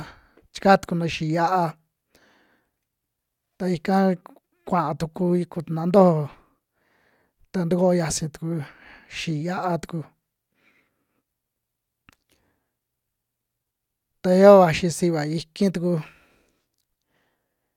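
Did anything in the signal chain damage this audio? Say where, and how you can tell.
No, nothing audible in this speech recording points to damage at any stage of the signal chain.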